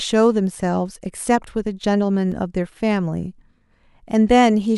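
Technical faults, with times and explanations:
2.32 s, block of digital silence: the output buffer likely went unfilled for about 3.4 ms, so samples dropped abruptly to silence and back, heard as a tick or dip.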